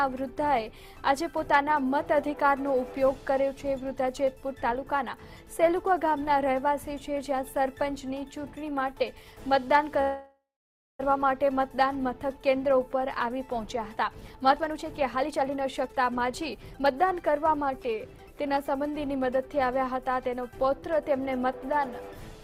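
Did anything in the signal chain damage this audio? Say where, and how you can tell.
Yes, at the network and jitter-buffer stage. From 10.01 to 11.01 s there is a call audio freeze: the last sound is stretched into a fading buzz or hiss and then about 580 ms of silence, and the audio then resumes where it left off. Unlike packet loss, nothing is skipped. The one-second gap is most likely from packets being held up in transit.

From 14.15 to 18.95 s a jitter buffer speed-up runs the audio at about 120% speed, trimming roughly a second of backlog by cutting short pitch-period slices. The pitch stays put, which rules out resampling or clock drift.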